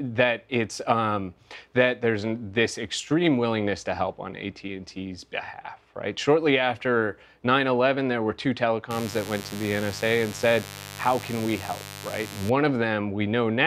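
From 8.9 s to 12.5 s a mains buzz sits under the sound, a steady, raspy rasp rather than a smooth hum. It points to a dimmer, rectifier or unshielded run letting sharp switching spikes from a 50 Hz supply into the signal twice per cycle, roughly 15 dB below the programme. On a spectrogram it shows as a dense comb of harmonics spaced 50 Hz apart, climbing into several kHz.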